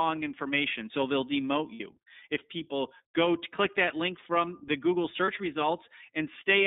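Speech squeezed through the iLBC codec: nothing passes below 200 Hz or above 3.7 kHz, leaving a flat-topped spectrogram, and plainly audible synthetic roughness from its 30 ms frame coding. Lost iLBC frames appear at 1.74–1.81 s, right after "they'll demote", and at 5.24–5.29 s. The decoder fills each gap with a repeated pitch cycle and noise, heard as a brief buzzy held vowel. On a spectrogram these gaps show smeared, repeating harmonic stripes, and on a waveform they show repeated cycles. The first gap fits about 60 ms of loss, two frames, and the second fits a single 30 ms frame.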